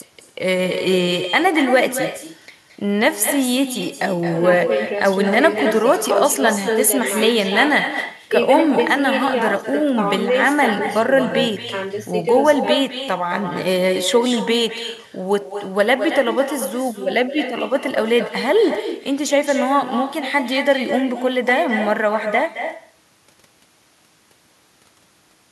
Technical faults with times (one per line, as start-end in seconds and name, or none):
0.00-25.52 echo with no canceller